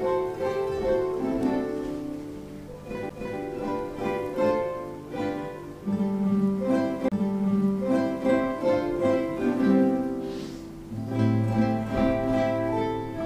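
There's a CD skip at 3.09 s, and another from 7.08 to 7.12 s. In each, the laser lost its place on the disc's spiral and landed on a different turn, so the player briefly muted and carried on from somewhere else. You hear a quick tick, a very short break (around 10 ms the first time, around 30 ms the second), and then the sound abruptly resumes at a different point.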